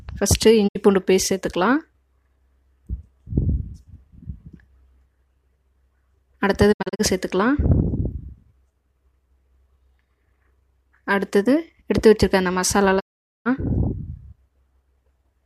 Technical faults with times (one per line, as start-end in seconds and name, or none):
0.67-0.77 digital broadcast dropout
6.71-7.01 digital broadcast dropout
12.99-13.47 digital broadcast dropout